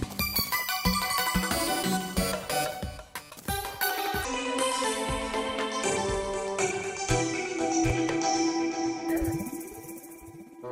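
The audio opens with a section at the wrong speed, from 0 to 4.25 s. It runs 1.52 times too fast, pitched up about seven semitones, likely from a clock mismatch.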